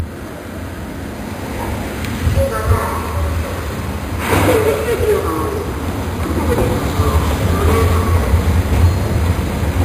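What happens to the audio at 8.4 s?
At 8.4 s, as throughout the clip, a bright metallic fizz rides the sound. This is imaging from sample-and-hold upsampling: 11 kHz audio was raised to 48 kHz by repeating samples, leaving mirrored copies from about 5.5 to 11 kHz, roughly 21 dB down.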